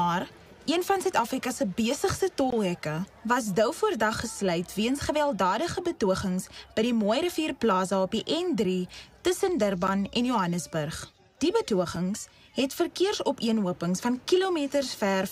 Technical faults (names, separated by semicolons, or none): block of digital silence